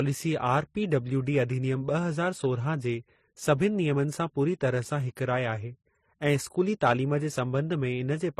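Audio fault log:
Throughout, transcoding between lossy codecs: nothing is heard above 13.8 kHz, and smeared, warbling textures sit alongside an MP3's own swirly artefacts. This likely comes from a low-rate HE-AAC encode later re-encoded as roughly 40 kbit/s MP3, which spent bits re-coding the earlier damage.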